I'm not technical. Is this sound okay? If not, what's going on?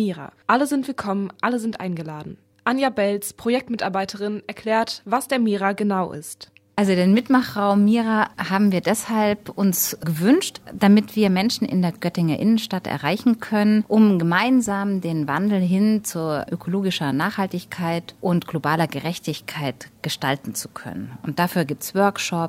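Yes, this sound is okay. Nothing in it points to a technical problem you need to worry about.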